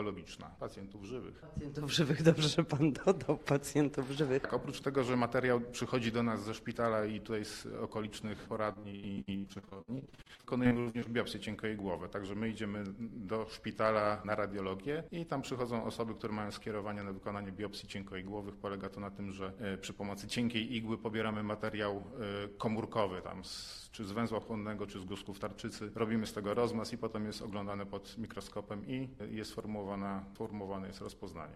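From 8.73 to 11.08 s the audio breaks into repeated packet loss, giving a robotic sound. Over this roughly 2.35-second stretch, dozens of short holes arrive in quick succession, the longest about 75 ms. Each hole is patched by extending the sound that came just before it, and about 43% of the span is concealment of this kind rather than received audio. The result is choppy and robotic, with the synthetic fill repeating and fragments of the original missing.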